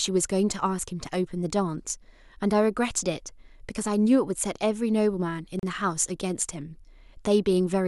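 At about 5.59 s the speech drops out for roughly 36 ms, until 5.63 s, then picks up right where it left off. That's a gap at a join of encoded pieces: two separately encoded chunks were stuck together without trimming, so the encoder's start-up delay and the padding on the last frame of the earlier piece both stayed in as silence. You hear it as a quick hole, its edges smeared by the codec.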